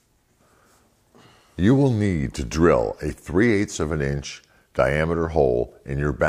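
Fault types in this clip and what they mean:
No technical faults are audible anywhere in this audio.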